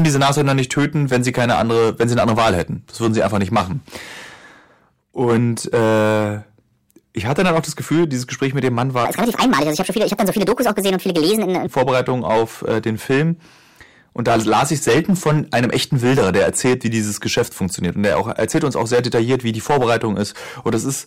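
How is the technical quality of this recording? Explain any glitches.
The recording has two clear technical faults. Hard clipping runs through the whole speech clip, and one short passage plays at the wrong speed.

Hard clipping is present throughout. The level is overdriven by about 10 dB, so peaks are cut flat at the converter's limit, adding harsh upper harmonics and audible crackle on louder syllables.

A section at the wrong speed runs from 9.05 s to 11.67 s. It plays 1.46 times too fast, likely from playback on a mismatched clock, so the voice rises roughly seven semitones and sounds hurried.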